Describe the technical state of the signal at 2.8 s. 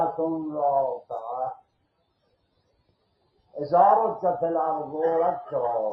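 At 2.8 s you're right inside a stretch, from 1.54 to 3.55 s, where the sound gets cut by the noise suppressor. The suppressor has judged this material to be noise and pulled it down harder than its surroundings, with the deepest dip reaching about 21 dB. Anything steady or decaying sinks away or has its tail chopped short. Only sharper onsets poke through at something like their proper level.

That dip sits on top of a broader problem: a noise suppressor tuned for speech has been applied to music or sounds for the whole clip. It can't tell sustained tones, ambience and reverb from background hiss, so it keeps clamping down on them while letting transients pass. The gain swings by roughly 15 dB as it opens and closes, which gives the audio a pumping, fluttery, thinned-out character right across this moment.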